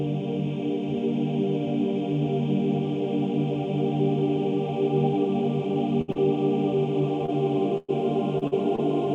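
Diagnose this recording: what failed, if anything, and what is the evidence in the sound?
The network is at fault, with a burst of packet loss at 6.01 to 6.10 s and again at 7.78 to 7.90 s, losing about 60 ms and 100 ms. In each gap the receiver stretches the last sound and fades it, then playback jumps ahead, skipping the lost stretch.

Short concealed packet loss, also a network fault, appears at 6.12, 7.26, 8.38, 8.47 and 8.76 s, each losing 20 to 40 ms. The decoder extrapolates the preceding sound across each hole and crossfades back, leaving brief smears or wobbles, clustered densely near the end.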